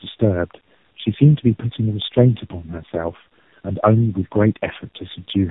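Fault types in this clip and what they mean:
tandem speech coding: throughout, the speech sounds decoded and re-encoded by three low-rate speech codecs in turn, which fits an AMR-NB, G.729A, AMR-NB chain. Each coder's errors compound on the last, leaving rough, muffled, warbly speech with nothing above 3.8 kHz.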